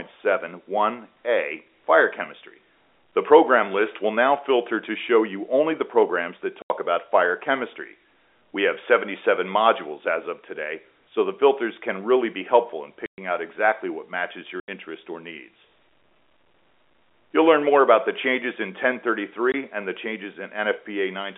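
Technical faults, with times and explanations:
6.62 to 19.54 s, packet loss filled with silence: The speech drops out four times: 6.62 s for 80 ms, 13.06 s for 120 ms, 14.6 s for 80 ms, 19.52 s for 20 ms. All gaps are multiples of 20 ms, which fits lost 20 ms packets. Silence replaced them, leaving holes with hard edges.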